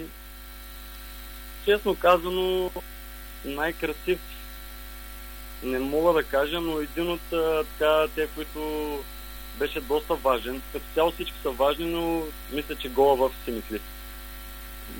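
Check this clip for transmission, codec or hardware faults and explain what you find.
Two short faults are present, both of the same kind.

Chunks out of order at 2.68 to 2.80 s and 9.32 to 9.40 s: a 40 ms block arrived late and played after its successors, two blocks late at first, one later. Nothing is missing, but the reshuffled pieces sound jumbled.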